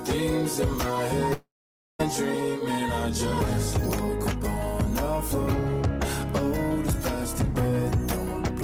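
A long network dropout likely cut off incoming audio from 1.33 to 2.01 s, and about 0.66 s of the sound never arrived. The receiver stretched the last sound into a fading buzz or hiss, leaving about half a second of silence before the audio resumes without the lost section.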